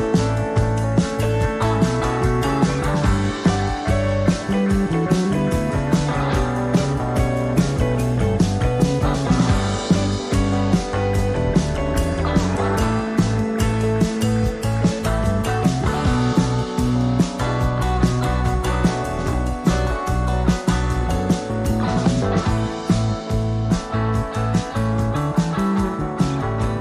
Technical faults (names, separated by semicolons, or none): MP3 compression; compressed frames skipped